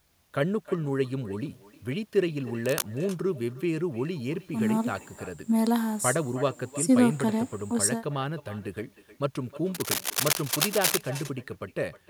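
A speech recording where every phrase is trailed by a quieter, thinner copy arriving roughly a third of a second later, about 17 dB below the direct sound. This is echo with no canceller: the far end's loudspeaker feeds its microphone, and nothing strips that pickup before it returns across the network. Brief rustling scratches sit over the speech from 2.66 to 2.83 s, a little below its level, and again from 9.74 to 11.01 s at roughly equal loudness. This cable scratch noise is likely a worn cable, connector or control being moved, its contact resistance fluctuating rapidly.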